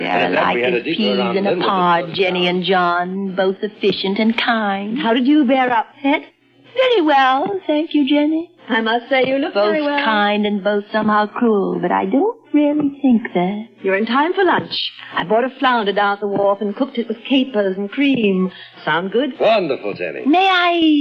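Near the end, from 20.08 s to 21.01 s, a Bluetooth SBC bit pool drop sets in: the link appears to have congested and the encoder cut its bit budget, which fits a bit pool falling from 28 to 14, around 108 kbps. The top sub-bands lose their bits, so the treble dulls and gritty quantisation noise rises through the final second.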